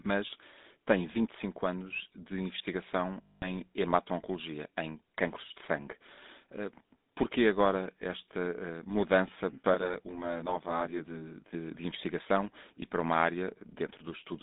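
The speech here has been through the original GSM full-rate codec for its whole length, which fits a 13 kbps coder. That codec models the vocal tract as a filter and excites it with a sparse, regularly spaced pulse train rather than the true residual, so the result is the familiar buzzy, gravelly texture. The line band runs only from about 200 Hz to 3.7 kHz, so the sound is thin and lacks its top, and the codec damage is plainly audible. From 3.22 to 3.49 s there are lost GSM frames, which fits about ten consecutive bad frames, roughly 200 ms of missing data. The decoder kept reusing the parameters of the last good frame, so instead of a clean gap the sound freezes into a rough, metallic ring before normal decoding resumes. Between 9.74 and 11.54 s there is a channel delay causing comb filtering. One channel arrives around 20 ms late, and when the two are folded to mono, their shared content cancels at regularly spaced frequencies, with the first notch somewhere near 30 Hz and further notches following closely up the spectrum. 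That dense set of fixed notches gives the passage a rough, slightly doubled quality that stops when the channels line up again.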